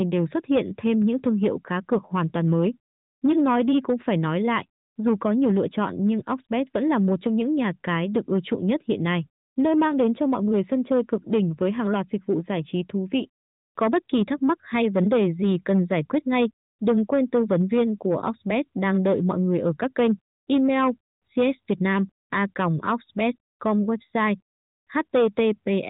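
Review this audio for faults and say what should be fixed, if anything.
Hard clipping runs through the whole recording. The speech was driven about 8 dB past what the chain could pass, so peaks are cut flat. A few percent of samples hit the ceiling. That adds harsh crackle and fuzz on loud syllables. Leave enough headroom when setting input gain before the converter to prevent it.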